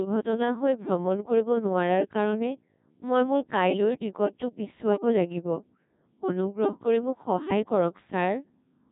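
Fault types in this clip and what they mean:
Codec 2 vocoder: The speech passes through Codec 2, a very low-rate digital-radio vocoder, here at about 1.6 kbit/s. It sends only pitch, voicing, energy and a rough spectral envelope, and the decoder rebuilds the voice from sine waves instead of keeping the waveform. Throughout this clip the damage is heavy: the voice sounds robotic and buzzy, with a synthetic tone.
Bit errors on digital voice radio: Corrupted bits reached the vocoder decoder. At this bitrate each bit steers the pitch, level, voicing or spectrum of a whole frame, so a few flipped bits produce wrong synthesis parameters. The error rate sounds like roughly a couple of percent. From 4.89 to 5.00 s the voice briefly lurches in pitch and tone colour and turns into a short warbling bleep. The length of the burst fits about two damaged frames.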